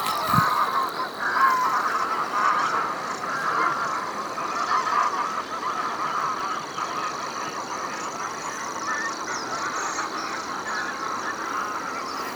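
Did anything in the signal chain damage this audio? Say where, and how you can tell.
Yes. At the driver and buffer stage the processor fell behind, producing processor overload crackle from 5.95 to 6.40 s. Around ten very short buffers, each a few milliseconds, missed their deadlines and were replaced by silence, so hard-edged dropouts tear through the audio as gritty crackle.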